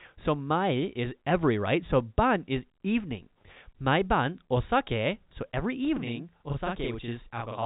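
Channel delay doubling runs from 5.97 s to the end of this speech clip, just after "ban osake so every". One channel arrives about 43 ms late, which fits a 2048-sample buffer, and when the two channels are summed to mono the late copy lands on top of the original as a separate slap or doubling at the same level. The whole clip comes through G.711 telephone coding, so nothing above 3.8 kHz is present.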